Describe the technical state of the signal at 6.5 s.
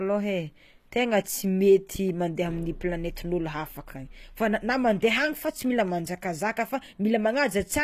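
At 6.5 s the speech has a bright but synthetic-sounding top end: s sounds come out gritty and metallic, and nothing is present above about 14.9 kHz. The damage is plainly audible and runs through the whole clip. The likely cause is HE-AAC compression at a low rate, fitting roughly 24 kbps, where only the lower spectrum is truly coded and the treble is rebuilt by copying lower bands upward, so its harmonics no longer line up with the real ones.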